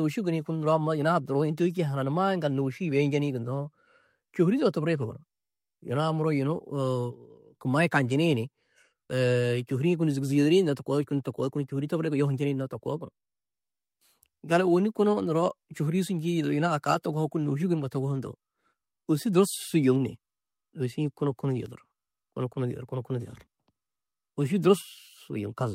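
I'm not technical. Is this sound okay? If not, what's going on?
Yes, this recording sounds fine, with nothing going wrong in it that you'd need to worry about.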